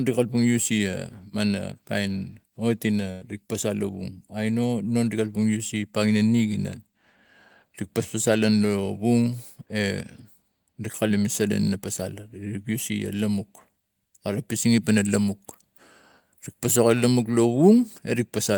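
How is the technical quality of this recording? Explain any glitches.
There is one glitch in the speech: a burst of packet loss from 3.11 to 3.28 s. The sound there freezes into a held, fading buzz or hiss for about 96 ms, then jumps ahead with about 100 ms of speech gone. Several packets in a row never arrived in time, so the receiver stretched out the last sound it had and faded it before resuming further on.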